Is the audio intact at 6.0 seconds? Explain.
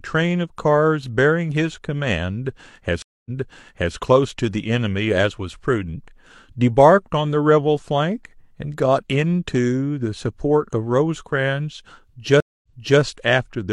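Yes, the speech at 6.0 seconds plays through intact, with no dropout, click, distortion or other fault audible at that moment.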